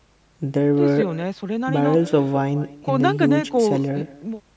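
From start to finish, the speech carries echo with no canceller: the far end's loudspeaker feeds the call back into its microphone, and nothing subtracts it, so every phrase returns about a fifth of a second later, roughly 18 dB quieter and thinner. On a waveform each burst trails a small delayed replica. On a spectrogram, which shows nothing above 8 kHz from the call's microphone processing, faint copies of each syllable sit just behind the originals.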